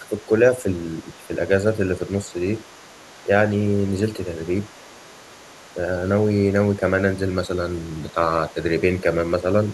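Overdone noise removal runs through the whole recording. The noise reduction was set too aggressive, so individual frequency bands near its noise estimate are pulled down or switched off, taking quiet parts of the speech with them. The background falls to near silence with scattered twinkling specks. Unlike echo-canceller gating, this colouring never comes and goes with anyone else talking. It is constant.

From 0.0 to 4.2 s, the speech is suppressed in double talk, most likely because the echo canceller could not separate the near talker from loudspeaker echo while both sides spoke and turned everything down. Short stretches, adding up to well under a second, dip by as much as about 10 dB. The dips track the other side's activity rather than the signal level, which sets them apart from the steady thinning above.

From 0.2 to 8.54 s, the other side's voice leaks through faintly, around 30 dB below the main speech. 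The likely cause is echo the canceller failed to remove from the microphone. It reads as a second voice, not as noise. It returns briefly at 9.64 s until the end, slightly fainter, about 35 dB down.

From 6.8 to 9.08 s, double-talk suppression recurs more mildly, with dips of about 5 dB totalling a fraction of a second.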